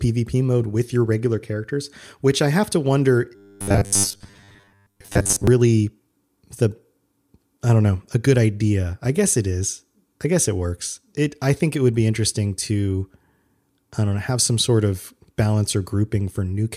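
A speech clip with one clear fault. Just after "I have to wonder", from 3.35 to 5.47 s, the voice collapses into robotic sound from repeated short buffers. It becomes a rigid, metallic buzz near 100 Hz that only loosely tracks the words. That pitch points to one 10 ms chunk being replayed again and again. Most of that stretch is repeats, not fresh audio. The likely cause is new audio arriving too seldom, with the gaps filled by looping the last buffer.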